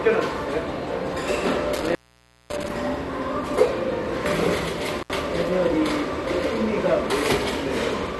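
Throughout, the sound is dull and carries a gurgling, granular grit, with nothing present above about 12.2 kHz. This is likely MP2 compression at a low bit allocation, consistent with roughly 64 kbps, where upper sub-bands are switched off and the remaining ones are coarsely quantised.

From 1.75 to 2.70 s, and again from 4.99 to 5.13 s, the sound drops out with crackle at the edges. This is an intermittent contact, a loose connection opening briefly, for about 0.55 s and then about 72 ms.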